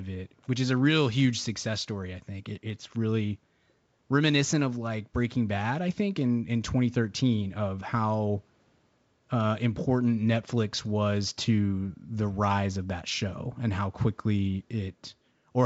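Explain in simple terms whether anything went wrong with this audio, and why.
Nothing went wrong here: the speech comes through a G.722 wideband telephone link working as intended, which keeps the voice clear up to about 7 kHz, and no technical fault can be heard anywhere in the recording.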